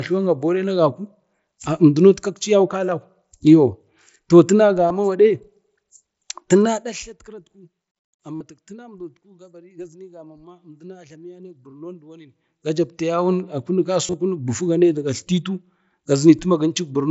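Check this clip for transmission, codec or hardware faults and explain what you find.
Yes, there's one kind of fault: concealed Bluetooth headset packet loss, hitting three times in this speech, which runs through the wideband mSBC headset codec. Around 4.88 to 4.90 s, just after "toh tina", about 22 ms drops out. Then 8.35 to 8.41 s loses about 52 ms. Around 14.06 to 14.14 s, just before "a kunik", about 52 ms goes missing, scattered over 75 ms with the longest gap 30 ms. In each case, the phone's receiver filled the gaps by repeating the best-matching slice of the last 20 ms or so. You hear a brief buzzy held tone, then a slight warble as real audio resumes.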